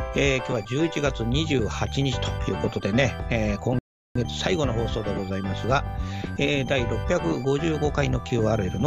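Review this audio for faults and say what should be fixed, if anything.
Sound cuts to silence from 3.79 to 4.16 s, then resumes exactly where it stopped: a rebuffering stall, the player starving for data and adding 368 ms. Prevent it with a deeper playback buffer or more headroom in delivery bandwidth.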